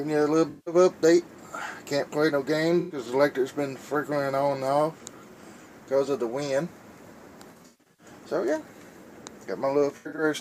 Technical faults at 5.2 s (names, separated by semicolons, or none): none